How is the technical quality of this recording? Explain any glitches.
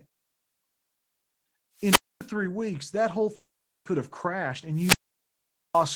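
The recording has three clear interruptions in the speech: two wireless microphone squelch dropouts and one gap that is likely a long network dropout.

At 1.77 to 2.30 s there is a wireless microphone squelch dropout. The analogue FM link from the microphone weakens, and the receiver's squelch gate closes when the signal falls below its threshold. You hear hiss swell briefly, then a hole of near silence lasting about 0.25 s, and then the voice returns. The second squelch dropout, at 4.73 to 5.88 s, follows the same pattern but the mute is much longer, about 0.82 s, so the signal stayed below threshold for most of that span.

At 3.35 to 3.87 s the audio stops abruptly. The last sound carries on as a fading buzz-like tail, followed by roughly 0.39 s of near silence. Speech resumes with about half a second missing. This is likely a long network dropout: packets stopped arriving, the receiver extended the last audio to cover the gap, then gave up and output silence. 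The missing stretch was never recovered.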